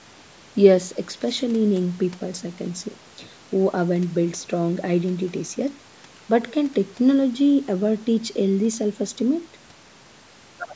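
No technical faults are audible.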